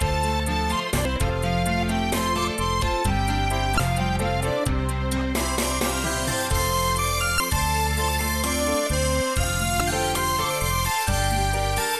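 Damaged data in a compressed stream at 1.02–1.06, 3.76–3.80, 7.37–7.40 and 9.77–9.81 s: the decoder misreads corrupt frames and loses sync, leaving a brief chirp, squawk, click or short hole at each.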